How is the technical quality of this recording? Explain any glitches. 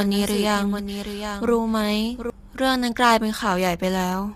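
The quality's compromised: the speech is grainy all the way through, and there's a doubled copy in the first part.

Throughout, the speech sounds rough and grainy, with noise filling the gaps between harmonics and a thin, synthetic-sounding top end. That's likely low-delay AAC compression (AAC-ELD). Its short frames can't resolve pitch harmonics well, and the damage fits a low bitrate of around 32 kbps.

From the very start until about 2.3 s, there's a doubled audio track, likely from a second capture path or an edit that left two copies out of step. A clean full-band copy trails the original by roughly 0.7 s at about 10 dB quieter, with no room colour, and it cuts off abruptly at 2.3 s.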